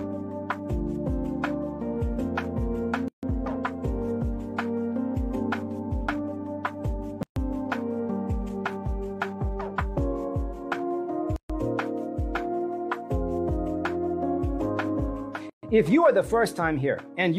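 Four short dropouts cut into the continuous sound, at 3.08 to 3.23 s, 7.23 to 7.36 s, 11.36 to 11.50 s and 15.50 to 15.63 s. The first lasts about 148 ms and the others about 133 ms each. Each one snaps in and out with softened edges, and the sound resumes exactly where it stopped. The steady 4 s spacing marks these as gaps at joins of encoded pieces: separately encoded segments were spliced without trimming each run's start-up delay and last-frame padding.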